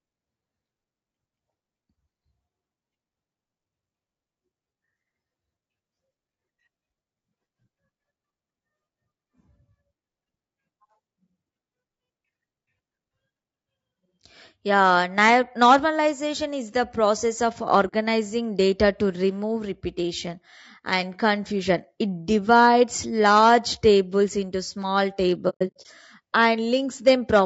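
Right through the clip, the speech sounds rough and grainy, with noise between the harmonics, likely low-delay AAC compression at a rate around 32 kbps. At 17.87 s, just after "is the process of", AAC frame loss with muting leaves a soft-edged 60 ms hole that fades out and back in. It happens again from 25.49 to 25.87 s, after "large tables into small", as scattered gaps totalling 240 ms, the longest around a tenth of a second.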